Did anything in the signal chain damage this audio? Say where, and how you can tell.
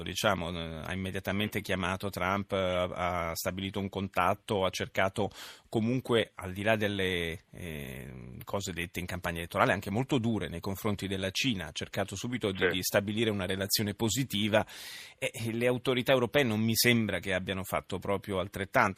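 No, nothing in this speech recording stood out as damage from any stage of the signal chain when listening.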